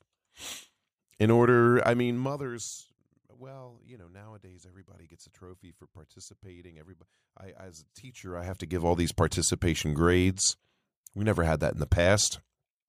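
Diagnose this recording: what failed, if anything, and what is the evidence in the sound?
The failure is zipper noise at the gain stage in the buffer processing, from 7.98 to 8.94 s, between "I as a" and "these participation grades". The level moves by about 25 dB in 1 dB jumps, around fifty per second, and each jump leaves a faint click, so a ticking rides on the sound. That rate points to a gain applied once per block of roughly 20 ms with no interpolation. A properly ramped fade moves silently.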